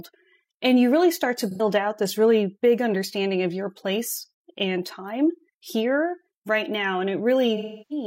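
At 1.51 s, AAC frame loss with concealment smears about 0.1 s of speech into a noisy, phasey patch, consistent with two lost frames refilled from the last good spectrum. From 7.56 to 8.05 s, a longer loss decays toward silence. Spectrograms show blurred, flattened harmonics, then fading energy.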